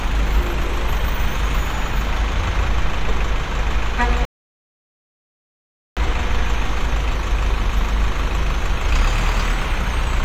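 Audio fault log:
4.25–5.97 s, rebuffering stall: playback halts into silence for about 1.7 s, then picks up exactly where it left off. The player drained its downloaded audio and waited for more data, so nothing is skipped, but the gap adds that time to the clip.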